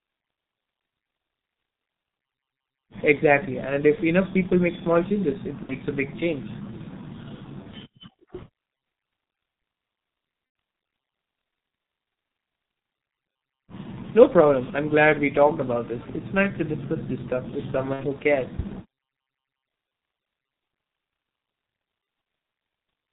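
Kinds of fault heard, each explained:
G.723.1 codec: The speech was carried by an early low-rate telephony codec, and the sound points to a rate of about 6.3 kbit/s in 30 ms frames. Nothing above 4 kHz gets through, so the voice is muffled. Because the codec's voice model updates only slowly, the damage is heavy, with a hoarse, rough quality throughout the 23-second clip and consonants that smear together instead of landing crisply.
VoIP packet loss concealed by the speech codec: Packets went missing, and the decoder filled each gap by extending its last pitch and filter while turning the level down frame by frame. At 3.95 s, 5.63 to 5.74 s, 10.46 to 10.55 s and 17.93 to 18.03 s the speech stretches into a fading buzzy tone or coloured noise. The gaps fit one, two, three and two lost 30 ms frames, and the voice stays thin briefly after each one.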